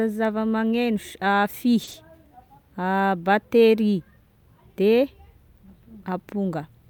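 At 1.83 s a packet arrived late and the jitter buffer ran dry, a short stall from a late packet. The receiver held the last sound for 40 ms until it turned up, then resumed where it left off. Nothing is lost, but the sound stretches slightly until 1.89 s, adding 40 ms of delay.

Right after, at 1.91 s, short concealed packet loss: 20 ms of the speech never reached the decoder, and the receiver filled the gap by extending the preceding sound before blending back at 1.95 s. This comes across as a brief smear or wobble, with that sliver of speech gone.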